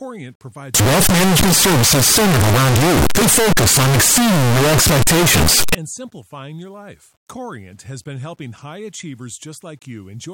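From 0.75 to 5.75 s, before "and simplifying your life", speech turns into loud, harsh distortion. Even quiet parts blare. Signed and unsigned mixed up is the likely cause.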